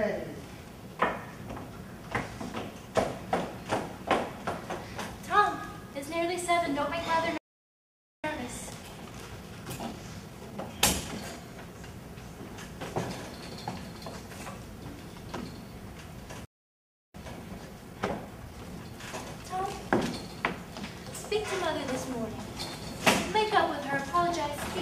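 At 7.38 s the sound cuts to silence for about 0.86 s, a playback stall, then resumes at 8.24 s; a second stall silences it from 16.45 s for about 0.69 s. Each gap is likely the player running short of data or its thread being blocked. After each stall the audio comes back hurried but at normal pitch: 1.15 times speed from 8.24 to 11.24 s, and 1.1 times from 17.15 to 20.15 s. This is time-compressed catch-up, where the player trims its backlog by cutting out small pieces and cross-fading across them.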